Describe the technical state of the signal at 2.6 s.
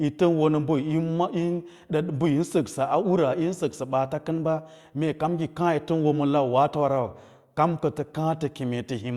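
Clock drift between sender and receiver affects 2.6 s as it does the whole clip. The sending clock runs roughly 2% slow against the receiver's, so the jitter buffer keeps draining and the receiver has to fill the gap to avoid running dry.

Repeated timing corrections span 0.26 to 9.08 s, including 2.6 s. To compensate, the receiver repeats short pieces of the speech, playing it at about 98% speed and adding something like 150 ms overall. These small, unevenly spaced edits are heard, if at all, as slight hiccups or an unsteady tempo.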